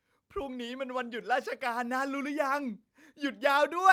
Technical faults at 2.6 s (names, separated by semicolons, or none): none